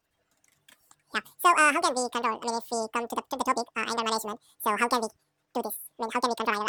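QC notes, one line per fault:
Throughout: audio read two samples at a time (double speed). The speech plays at 2.0x speed and an octave high. Each pair of samples is taken as one frame, so the audio runs twice as fast.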